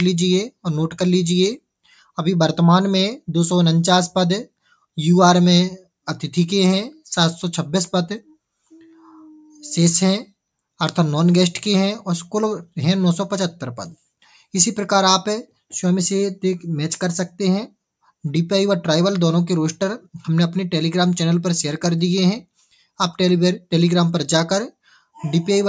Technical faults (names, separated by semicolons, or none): sound cut by the noise suppressor